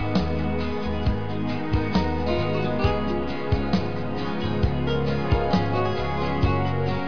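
No technical faults are audible anywhere in the audio.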